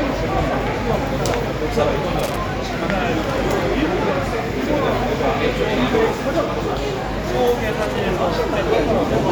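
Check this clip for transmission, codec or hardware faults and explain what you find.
One hardware fault appears twice: loose connector crackle at 2.19 to 2.37 s and 7.82 to 7.99 s. A worn or dirty contact intermittently breaks the signal path, chopping the audio and popping on any DC offset, giving brief irregular bursts of scratchy crackle.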